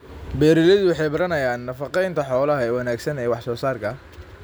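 No technical faults can be heard anywhere in this speech recording; the signal stays continuous and intact throughout.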